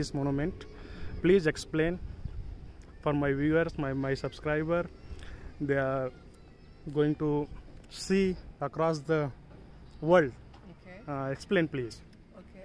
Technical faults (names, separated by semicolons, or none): none